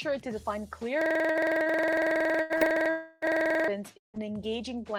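At 1.01 s the system hang loop kicks in and runs to 3.68 s. Something froze while the hardware kept replaying one 46.44 ms slice about 58 times, which fits a 2048-sample buffer. You hear a rattly 21.5 Hz stutter.

Inside that stretch, at 1.31 s and 1.63 s, there's short concealed packet loss: 40 ms went missing each time, and roughly 32 ms was patched by extending the previous sound, leaving a quick smear or wobble. Another one at 2.58 s is similar, with the repair stretched a touch longer before it blends back in.

Just before that, from 2.42 to 2.53 s, a burst of packet loss drops about 80 ms. The receiver holds the last sound and fades it, so you get a brief held buzz or hiss, then a jump ahead.

From 2.90 to 3.25 s a continued sound fades across about 320 ms without ever reaching silence, then the audio resumes further along. That's likely a long network dropout. A second one, likely the same, shows up from 3.98 to 4.17 s, where a fading tail gives way to roughly 140 ms of silence before the audio comes back with 160 ms gone.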